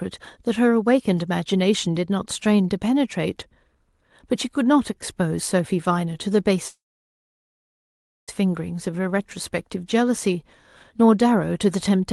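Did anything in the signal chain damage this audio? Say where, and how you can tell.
Yes, two problems, both at the network and jitter buffer stage of the call. From 6.67 to 8.30 s there's a call audio freeze: the sound stalls, a brief fading continuation trails off, then roughly 1.5 s of silence, and it picks up exactly where it left off. About 1.6 s has been inserted and nothing is lost. That's most likely packets held up in transit, the jitter buffer running dry, and the receiver waiting them out.

Right after, from 8.86 to 9.10 s, there's a jitter buffer slow-down. That stretch plays at about 86% speed, but the pitch doesn't drop, so sounds are drawn out by about 39 ms in total. The receiver is rebuilding its reserve after the stall, repeating single pitch periods several times over instead of resampling, which is why the timing stretches while the pitch stays put.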